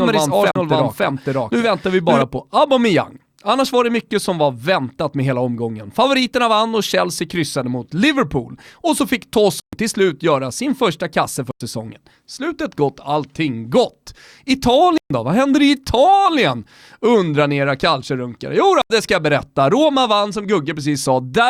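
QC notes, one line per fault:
0.0–2.22 s, doubled audio track: the speech is already running with a second copy of itself trailing about half a second behind, at roughly the same level. It's full-band and dry, with no room tail, so it sounds like a pasted-in duplicate, not an echo. The copy then cuts out abruptly at 2.22 s. It's likely a second capture path or an edit leaving two takes out of step.
0.51, 9.6, 11.51, 14.98 and 18.82 s, block of digital silence: at each of these points the audio drops straight to silence and snaps back with no fade. The gaps are 43 ms at 0.51 s, 128 ms at 9.6 s between "så fick" and "till slut göra sin", 96 ms at 11.51 s after "göra sin första kasse", 128 ms at 14.98 s, and 85 ms at 18.82 s just before "det ska jag berätta". The first and last fit 2048- and 4096-sample blocks at 48 kHz, which points to output buffers that weren't filled in time.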